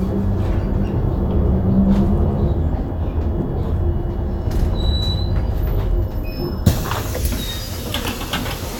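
No technical faults can be heard anywhere in this recording.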